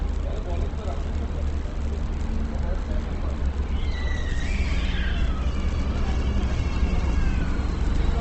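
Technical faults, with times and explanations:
Throughout, Opus compression: the sound is plainly grainy and rough, its tones turned noisy, with nothing above 8.2 kHz. This is likely Opus music mode near 16 kbps filling starved bands with noise. A spectrogram shows a flat 8.2 kHz ceiling over speckled bands.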